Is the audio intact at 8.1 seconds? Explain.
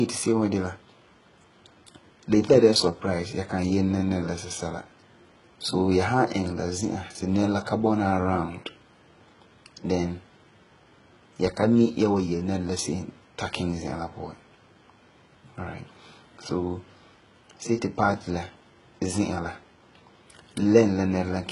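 No. At 8.1 seconds, as across the whole clip, the speech carries heavy damage that is likely HE-AAC compression, with a very low bitrate around 12 kbps. Only the lower spectrum is truly coded; the treble up to a hard ceiling near 11.1 kHz is rebuilt by copying lower bands upward, so s sounds come out gritty and metallic. A plain low-pass filter would sound dull, while here the top stays bright but falsely textured.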